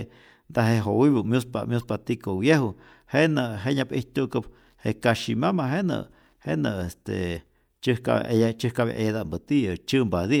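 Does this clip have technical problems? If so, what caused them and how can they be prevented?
Yes. Damaged data in a compressed stream causes short blips at 1.81 to 1.84 s and 7.33 to 7.37 s. Corrupted bytes make the decoder misread frames and lose sync until the next frame header. Checksummed transfers and verified copies prevent this.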